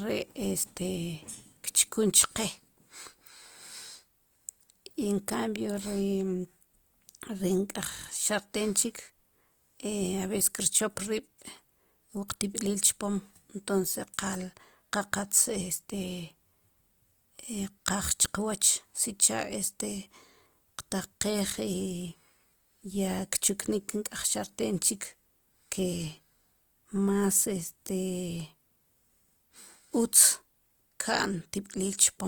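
Speech, with Opus compression heard throughout. Band energies hold up, but detail is plainly damaged. Tones come out grainy, rough and noisy rather than swirly. Bandwidth stays full, reaching about 20.2 kHz. The likely cause is Opus music-mode coding at a low rate, which fits roughly 24 kbps.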